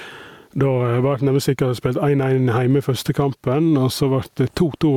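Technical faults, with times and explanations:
Throughout, gain pumping: the level swings by around 10 dB. This likely comes from excessive input gain being reined in by a fast limiter or compressor, which squashes the dynamics.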